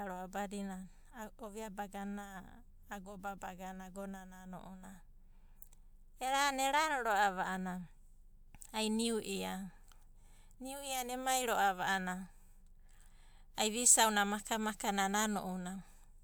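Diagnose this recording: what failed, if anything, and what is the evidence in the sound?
Nothing failed; no fault is audible in this recording.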